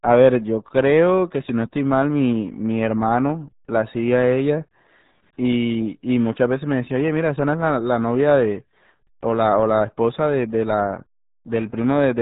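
A speech recording has been pushed through the RealAudio 14.4 codec, the old RealAudio 1 dial-up format, and the heavy coding damage points to a stream of about 8 kbit/s. At that rate the encoder discards everything above 3.8 kHz and rebuilds the rest from a coarse model, so for the whole clip the speech is muffled and thin, with a gargling, bubbly texture where detail in the voice should be.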